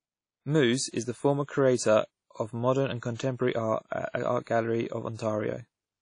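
Throughout the speech, plainly audible codec damage is present, likely WMA compression. Nothing is heard above 10.1 kHz. The transform coder spreads quantisation noise in time and drops weak spectral lines. The sound points to a low bitrate near 32 kbps.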